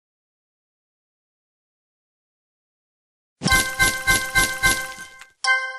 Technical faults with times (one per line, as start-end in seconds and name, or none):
3.79-4.90 repeated frames